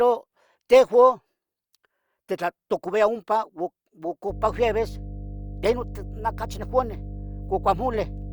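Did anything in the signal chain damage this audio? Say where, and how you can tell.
Yes, mains hum in the analogue wiring: from 4.29 s to the end, a steady 50 Hz tone sits roughly 15 dB under the speech, from a ground loop or nearby transformer leaking power-line current into the signal.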